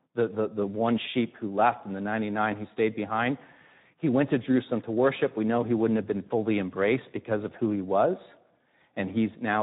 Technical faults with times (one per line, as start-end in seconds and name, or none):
0.00-9.63 Speex codec